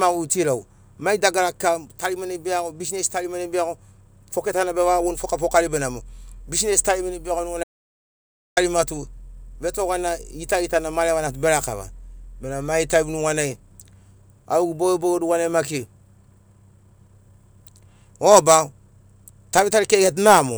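An audio dropout to silence runs from 7.64 to 8.57 s: the speech cuts off mid-flow and about 0.93 s of dead digital silence follows, with no room tone, before the sound resumes. The input was likely lost briefly while recording continued writing silence.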